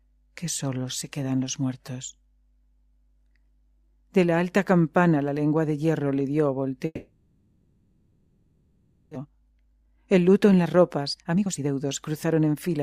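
A long network dropout runs from 6.85 to 9.17 s. The receiver fills about 2.3 s by stretching the last sound into a fading buzz or hiss, then a brief near-silence, and 1.6 s of audio never returns, most likely because packets stopped arriving entirely.

A jitter buffer speed-up follows from 9.24 to 12.78 s. The buffer held more audio than it aims for, so the receiver trims tiny pitch-period slices over and over, dropping roughly half a second. Playback runs at 114% speed without any pitch shift and sounds hurried.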